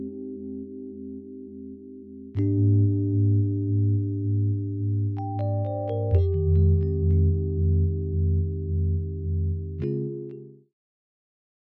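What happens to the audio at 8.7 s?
At 8.7 s the audio plays through intact, with no dropout, click, distortion or level change.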